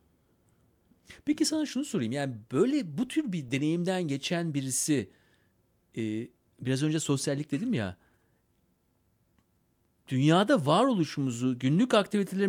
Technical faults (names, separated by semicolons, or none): corrupt frame decoded